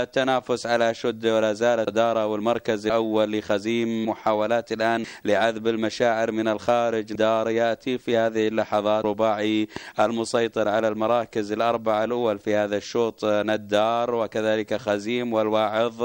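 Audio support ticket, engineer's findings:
Compressed frames skipped, three spots: 1.87 s, 7.15 s, 9.04 s. Sound jumps ahead by roughly a third of a second at the first and last, about a fifth of a second at 7.15 s. Frames are 32 ms. Jump sizes fit whole missing frames, around ten, seven, ten. Probable component: decoder dropping damaged frames, or frames missing from the file upstream.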